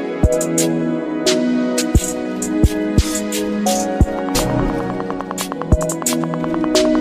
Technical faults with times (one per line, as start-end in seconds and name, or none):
4.19-6.96 train of clicks